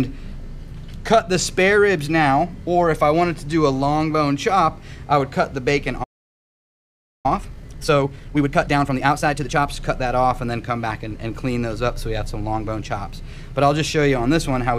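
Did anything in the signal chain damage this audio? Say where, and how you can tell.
Yes, at playback. At 6.03 s the sound stops mid-flow and stays silent until 7.26 s, a gap of about 1.2 s. It then resumes rather than jumping past a clean edit point, which marks a playback stall: most likely the player's buffer ran dry or its thread was blocked. Unlike a dropout from a network or codec, no packet-loss smearing or concealment noise fills the hole. There is only true silence and then a restart.

Straight after, from 7.26 s to 9.66 s, the audio runs hurried at 1.5 times normal speed with its pitch unchanged. This is time-compressed catch-up, as the player trims its backlog by cutting short pieces and cross-fading them together. It differs from a sample-rate mismatch or a tape-style speed-up, which would raise the pitch along with the tempo.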